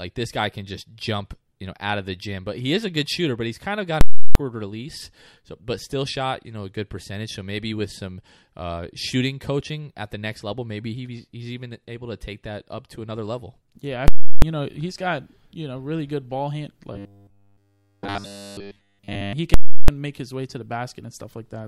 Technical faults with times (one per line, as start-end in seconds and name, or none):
4.01-4.35 invalid numbers at full scale
14.08-14.42 invalid numbers at full scale
16.93-19.33 robotic sound from repeated short buffers
19.54-19.88 invalid numbers at full scale